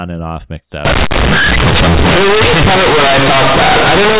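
From 0.85 s, just after "and off mixed", to the end, the speech shows companded audio read as linear: A-law bytes go out as plain 8-bit samples without expansion, so quiet passages become as large as loud ones, producing loud, buzzy distortion and heavy noise between phrases, over the narrow G.711 telephone band.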